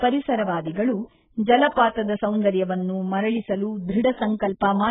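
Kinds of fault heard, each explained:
AAC compression: The speech is band-limited, with nothing above 3.8 kHz, and heavily damaged throughout, sounding dull and smeared with a warbling, fizzy texture on sustained sounds and sibilants. This is likely low-bitrate AAC-LC coding, which quantises each frame's frequency lines coarsely against a hearing model. With few bits available, the encoder drops the upper band and leaves gaps or substitute noise in the rest, consistent with a bitrate around 8 kbps.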